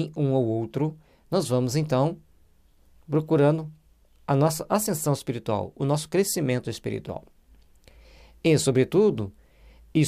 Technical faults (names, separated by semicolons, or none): none